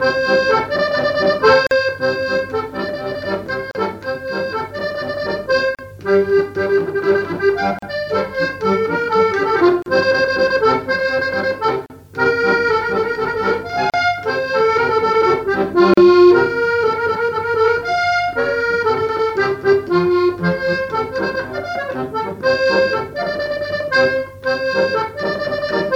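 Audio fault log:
1.67–15.94 s, gap at a join of encoded pieces: short silences open in the continuous sound at 1.67, 3.71, 5.75, 7.79, 9.82, 11.86, 13.90 and 15.94 s, one roughly every 2 s. The first lasts 44 ms and the rest 38 ms each. These are consecutive 2-second segments encoded separately and butted together untrimmed, so each join keeps the encoder's leading delay and final-frame padding as dead air. The edges are smeared by the codec, and the sound resumes exactly where it stopped.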